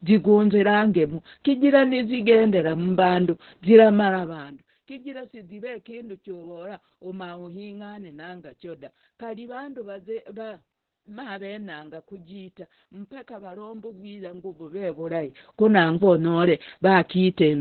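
Opus voice compression runs through the whole clip. The speech sounds like a very low bitrate, around 8 kbps, coded by SILK in narrowband: nothing above 4.2 kHz survives, so the voice is muffled, and the coarse excitation coding makes it hoarse and faintly robotic.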